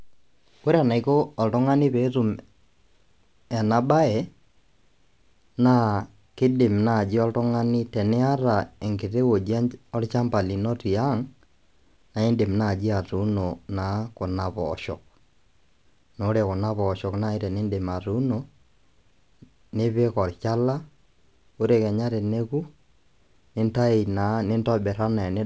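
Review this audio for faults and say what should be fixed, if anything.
No faults found and nothing to fix; the speech has come through a call path whose wideband codec leaves nothing above 8 kHz, as expected for G.722.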